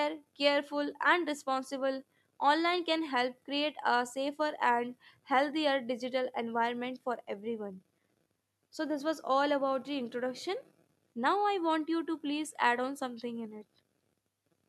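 No technical faults can be heard at any point in the recording. The speech runs from beginning to end without any audible event that points to a problem in the signal chain.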